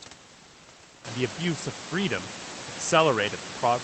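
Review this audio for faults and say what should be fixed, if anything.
Nothing to fix: the room noise sits about 27 dB below the speech, steps up by about 18 dB around 1 s to sit about 14 dB under it, and the Opus call path at 20 kbps caps the top end at 8 kHz, all normal behaviour for this chain.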